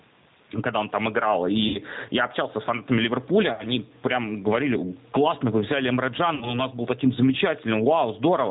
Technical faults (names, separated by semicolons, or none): gain pumping; G.729 codec; VoIP packet loss concealed by the speech codec